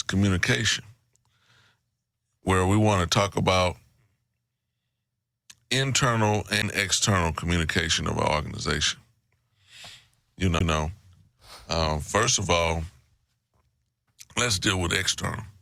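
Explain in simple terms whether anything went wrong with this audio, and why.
CD skips at 6.62 s and 10.59 s: a knock or a flaw made the player's laser jump to another turn of the disc's spiral. Each time the speech drops out for a tiny fraction of a second, then carries on from a different point.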